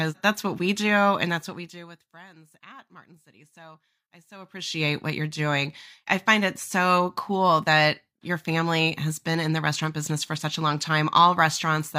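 No technical faults are audible anywhere in the speech.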